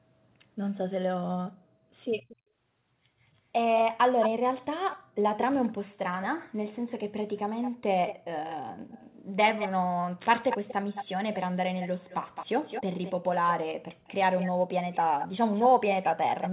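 Echo leak appears at 2.21–2.36, 3.76–4.29, 4.91–6.23, 7.36–9.69, 10.49–13.12 and 14.07 s to the end. A copy of the speech trails it by 215 ms, faint at first, nearly as loud at 3.76 s, and then about 20 dB down, later about 10 dB down. It is likely from a loudspeaker echo the canceller missed. On a spectrogram, the speech patterns appear again, shifted 215 ms later. The waveform shows smeared, overlapping envelopes.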